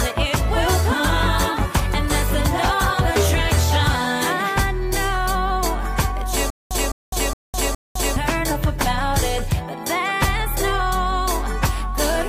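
The audio hits a stutter with silent gaps from 6.50 to 8.16 s. A short burst of about 208 ms plays four times. Each repeat is followed by about 207 ms of silence, a 415 ms cycle. The likely cause is a stalled stream replaying its last fragment. Sound from that stretch is lost.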